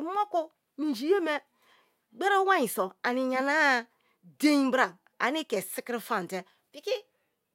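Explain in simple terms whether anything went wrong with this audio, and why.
Nothing went wrong with this speech recording that a listener can pick out. At no point does anything in it stand out as a technical problem.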